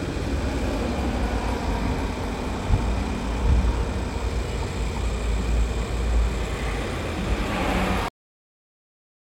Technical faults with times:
8.08-9.23 cut-off end

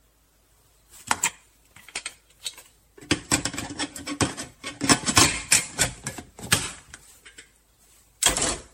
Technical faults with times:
0.00-8.73 generation loss

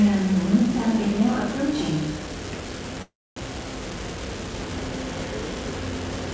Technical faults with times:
0.00-6.33 unreliable data bit
3.02-3.38 call audio freeze

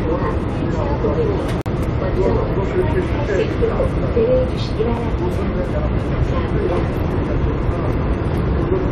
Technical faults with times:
1.61-1.66 gap between stream segments
5.65 gap between stream segments

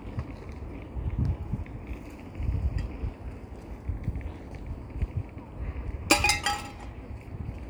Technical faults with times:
none

